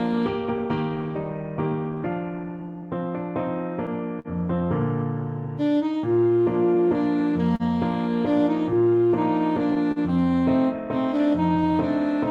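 Clock drift between sender and receiver runs through the whole clip: the sender's clock is about 3% slow, so the receiver's buffer keeps draining and playback never settles. Repeated timing corrections from 0.13 to 3.12 s play at 97% speed, stretching the sound by about a tenth of a second; they come across as faint, uneven hiccups and an unsteady tempo. A short stall from a late packet at 4.19 to 4.28 s holds the sound for 52 ms while the buffer sits empty, then picks up where it left off with nothing lost, giving a brief hold. Repeated timing corrections return from 5.46 to 12.13 s at 98% speed, adding roughly 150 ms, with the same slight unsteadiness. Two more stalls hold the sound for 39 ms at 7.56 to 7.63 s and 41 ms at 9.92 to 9.99 s.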